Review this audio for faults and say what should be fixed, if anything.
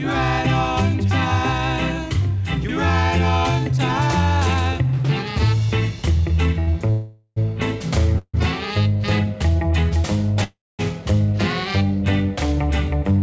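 A short stall from a late packet occurs at 6.60 to 6.69 s. A packet arrived late and the jitter buffer ran dry. The receiver held the last sound for about 73 ms, with a slight buzz or dip, then resumed from the same point. Nothing is lost, but playback is now 73 ms later. A larger or adaptive jitter buffer would absorb a delay this short.

Three call audio freezes follow, at 6.90 to 7.38 s, 8.18 to 8.36 s and 10.44 to 10.81 s. Each is likely caused by packets held up on the network, emptying the jitter buffer. The receiver continued the last sound as a fading buzz or hiss, then went quiet. The silence lasts about 20 ms in the first freeze, 50 ms in the second and 220 ms in the third. The filled spans are 459, 151 and 353 ms. The sound then resumes where it stopped, so gaps are added and nothing is missing. The call path passes nothing above 8 kHz, which fits G.722. Fixing the network congestion or queuing on the route would prevent these freezes.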